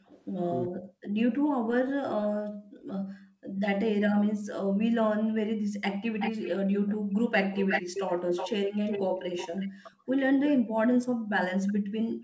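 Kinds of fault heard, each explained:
Background gated by the echo canceller: room sound drops out, up to about 40 dB, at the start, around 2.5 s and from 10.58 s, as the canceller clamps the microphone.
Echo leak: a delayed copy of the speech trails roughly 0.37 s behind, faint early, then nearly as loud after 6.19 s, likely from incomplete echo cancellation.
Speech suppressed in double talk: the talker's speech dips by about 40 dB in pieces near 0.7, 3.4 and 9 s, likely because the canceller mistook simultaneous talking for echo.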